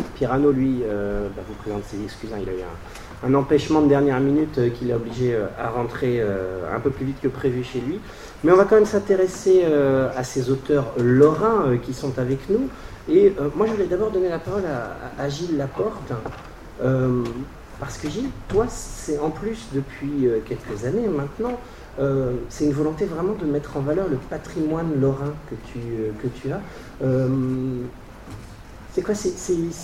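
Nothing stood out on listening to this audio.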